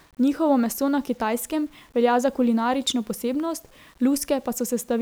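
From start to finish the speech carries a grainy, gritty distortion that tracks the signal, roughest on quiet syllables and decays, where low-level detail breaks up and sputters. This is low bit depth without dither, likely from rounding to very few levels; the error sits roughly 35 dB below the speech, which fits 8-bit rounding. A waveform shows visible stair-stepping near zero, and a spectrogram shows broadband hash that rises and falls with the speech rather than a steady noise floor.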